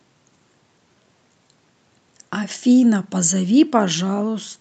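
No technical faults are audible anywhere in the speech.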